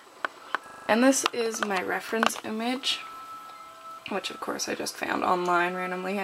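From 0.68 to 0.88 s, a system hang loop repeats one 40 ms fragment five times, a 25 Hz stutter replacing about a fifth of a second of audio.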